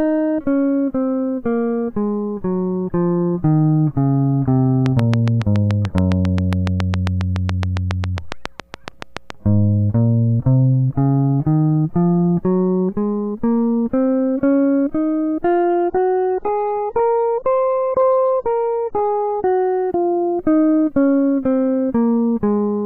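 From 4.86 to 9.31 s, a train of clicks, about 30 regular pops at 7.2 per second, about 15 dB above the music, likely electrical interference. From 15.64 to 19.64 s, the adaptive stream drops to a lower bitrate, consistent with a 96 to 16 kbit/s AAC switch, cutting everything above 7.9 kHz abruptly.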